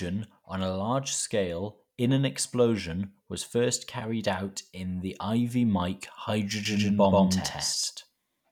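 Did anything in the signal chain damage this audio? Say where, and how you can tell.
Yes. From 6.65 s to the end, the speech carries a doubled audio track: a second, full-band copy sits a fixed delay of about 150 ms behind and at roughly the same level. It switches on abruptly, with no decay tail or room colouring. That rules out natural echo or reverb, which would fade and sound reflected. The likely cause is the same signal being captured a second time through a slower path at the driver or buffer stage, or an edit leaving two offset copies.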